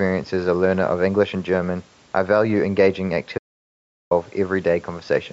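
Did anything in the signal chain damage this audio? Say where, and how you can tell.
Yes, an audio dropout to silence from 3.38 to 4.11 s: the speech stops mid-flow into silence with no room tone, unlike a natural pause, likely from the input link failing.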